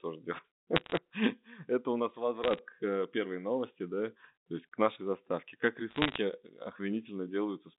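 Bit errors on a digital phone line crackle at 0.76–0.97 s, after "у нас" at 2.44–2.59 s, and after "к нашей заставке как" at 5.90–6.18 s: flipped bits in the mu-law samples, at a fraction of a percent, each change one sample, and hits on high bits leave sharp ticks.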